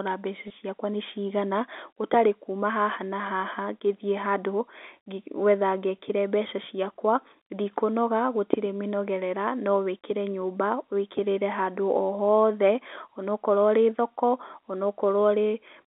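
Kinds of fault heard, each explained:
Packet loss with pitch repetition: about 20 ms of audio, fitting one lost packet, went missing at 0.48 to 0.50 s, just before "ciakwa nĩ cigana gũtarĩ". The last pitch period was repeated to fill it, giving a brief buzzy hold instead of a plain dropout's silent gap.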